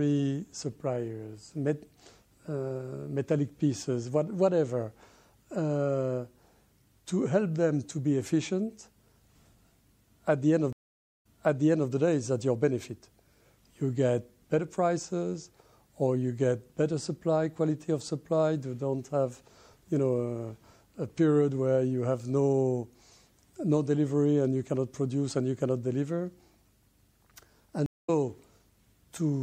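From start to finish the audio has a watery, swirling quality, with metallic chirps on sharp high sounds and softened attacks. This is plainly audible damage of the kind MP3 compression leaves, likely at a low rate, around 64 kbps. On a spectrogram the treble stops at a flat ceiling, and the upper region below it breaks into isolated blocks that flicker on and off from frame to frame instead of forming continuous texture.

At 10.73 s a stream reconnect begins. The connection drops, the player falls silent for 522 ms, and a fresh decoder picks up again by 11.90 s, but 653 ms earlier in the material, so a short stretch is heard twice. The waveform shows a flat gap followed by a soft fade-in, and the spectrogram repeats a pattern already seen just before the break.

A second reconnect at 27.86 s to 28.10 s is briefer, with about 217 ms of silence. This time the audio resumes roughly 200 ms further on, so a small piece is skipped. 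It appears as a narrow empty column followed by a sudden jump in spectral content.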